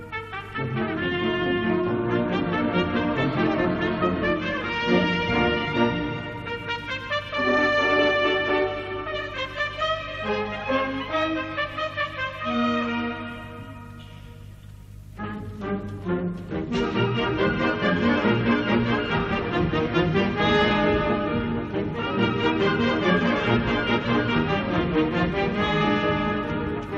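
No technical faults can be heard anywhere in this audio.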